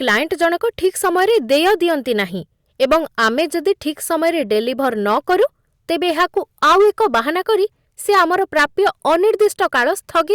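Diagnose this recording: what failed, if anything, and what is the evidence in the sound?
Hard clipping at the conversion stage runs through the whole speech clip. The signal is driven about 11 dB past full scale, so roughly 3 percent of samples are cut flat. Those squared peaks add high harmonics, heard as a harsh fuzz on every loud syllable.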